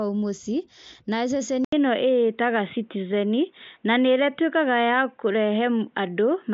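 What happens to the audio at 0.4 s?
Nothing goes wrong at 0.4 s: the speech there is intact, carried by the Bluetooth mSBC headset codec with its usual ceiling near 7.7 kHz.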